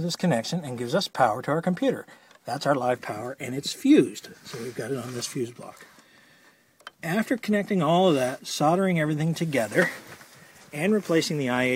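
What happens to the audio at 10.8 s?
Nothing goes wrong at 10.8 s; the audio plays through that moment intact, with no dropout, click or other fault.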